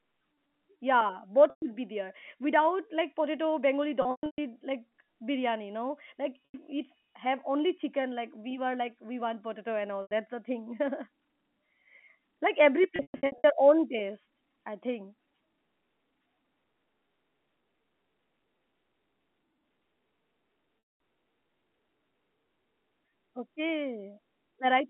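At 1.5 s, 4.02 to 4.38 s (scattered losses ending just before "like biryani no"), 6.45 s, 10.02 s (between "we want potato and" and "the thing"), 12.96 to 13.44 s (after "like every", before "own taste I think") and 20.79 to 21.0 s, the speech suffers packet loss with pitch repetition. The receiver bridges each gap by looping the last pitch period. The 90 to 120 ms gaps come out as a briefly held, buzzy tone, and the 210 ms run fades toward silence before a cross-fade returns to the speech. The 120 ms runs fit roughly four lost 30 ms packets. A plain dropout would give a hard silence or click instead, and the band-limited telephone sound of the G.711 line is present throughout.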